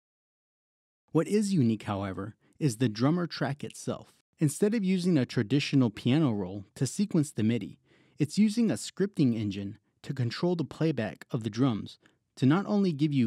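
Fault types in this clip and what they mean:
No audible faults turn up anywhere in the signal: no dropouts, gaps, level jumps, distortion or other disturbances.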